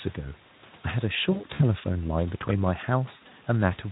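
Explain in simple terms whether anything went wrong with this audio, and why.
VoIP packet loss concealed by the speech codec, at 1.31–1.62 s and 3.15–3.33 s: pieces of the speech went missing, and the decoder filled each gap by stretching the last sound into a fading buzz or noise.

Processor overload crackle, at 2.42–2.59 s: the computer fell behind several times in a row and replayed scraps of old audio, which fits buffers of around 10 ms. The result is a short gritty crackle.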